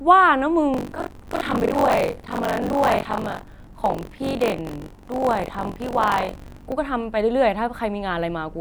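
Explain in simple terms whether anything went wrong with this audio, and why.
From 0.73 s to 6.74 s the speech takes on a robotic buzz, a fast rattle of about 47 times per second that stays for as long as someone is talking. This is buffer tearing. The playback system works through audio in small chunks, and the part writing them has fallen out of step with the part playing them. So roughly a third of every chunk replays sound from about 40 ms earlier, with abrupt joins. The rate fits a 1024-sample buffer.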